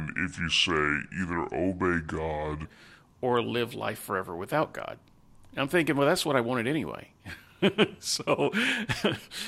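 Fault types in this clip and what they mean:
Section at the wrong speed: The opening 2.65 s of speech plays at 0.715 times normal speed. It sounds slow and deep, about five semitones low, likely from a clock mismatch.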